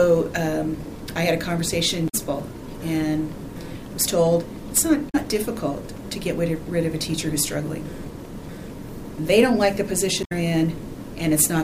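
Damaged data in a compressed stream hits three times: 2.05 to 2.15 s, 5.08 to 5.15 s and 10.20 to 10.32 s. Corrupted bytes throw the decoder off its frames. It loses sync and hunts for the next header. Each spot sounds like a brief chirp, squawk, click or short hole.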